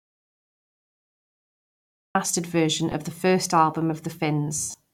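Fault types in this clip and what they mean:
Audio dropout to silence: From the start to 2.15 s, the clip is silence with no room tone, then the speech enters mid-flow. This points to the input being cut off, likely through a lost link or mute, while the recorder kept writing silence.
Lost LE Audio frames: At 2.92 s, just before "the first album", a 10 ms blip suggests one lost LC3 frame. From 4.58 to 4.74 s, about 140 ms is lost in bursts, the longest around a tenth of a second. The decoder repeats the last spectrum with scrambled signs, smearing speech into noise that fades.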